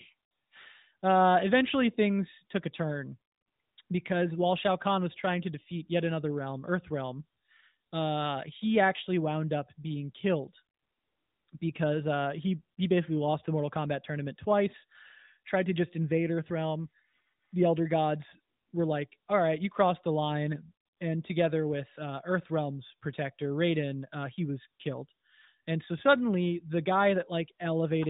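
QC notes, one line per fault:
No faults heard in this speech recording.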